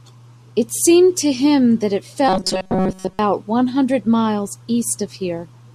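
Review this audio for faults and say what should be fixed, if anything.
Audio likely arrived too seldom between 2.28 and 3.19 s, so playback covered the gaps by looping a roughly 5.3 ms slice for most of that span. This robotic sound from repeated short buffers imposes a fixed 188 Hz buzz, making the speech metallic and rigid. A larger jitter buffer or a higher-priority audio thread would prevent these underruns.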